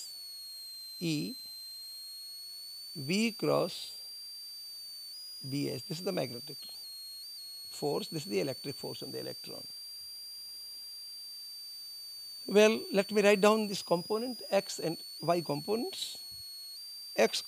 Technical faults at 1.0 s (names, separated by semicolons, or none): switching supply whistle